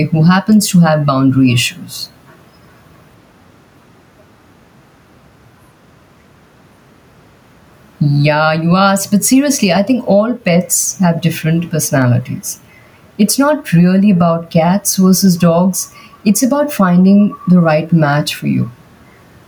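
Gain pumping runs through the whole speech clip, with the gain swinging roughly 10 dB; the room noise sits about 44 dB below the voice. That's likely a fast limiter clamping down on a mic gain set far too high, squashing the dynamics.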